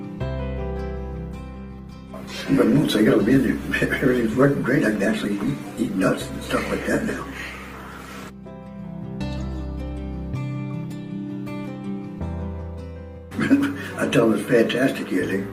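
From 1.19 s to about 7.27 s the audio goes through a call bitrate drop. The codec falls from what sounds like a full-band rate near 64 kbps to something closer to 18 kbps and holds that floor for roughly six seconds. Starved of bits, it quantises coarsely and discards the top of the spectrum, so the sound turns muffled and watery. A spectrogram shows the upper frequencies abruptly cut away across that span, then returning.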